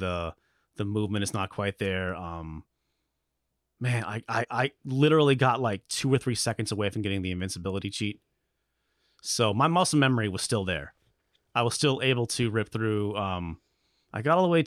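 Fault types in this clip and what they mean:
Compressed frames skipped: at 4.43 to 4.45 s the speech jumps ahead by roughly 30 ms, about one 26.1 ms frame, rather than leaving a silent gap.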